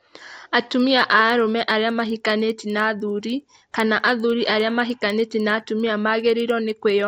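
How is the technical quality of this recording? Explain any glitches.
The recording carries one steady fault from start to finish: a faint, regular ticking under the speech. The fault is a resampler restarted on every block. The audio was converted from 16 kHz to 48 kHz in 100 ms chunks, each treated alone. At every chunk edge, the converter lacked the true neighbouring samples and made a small error. Those errors repeat at 10 Hz. They sound like a soft ticking that follows the speech and drops away in pauses.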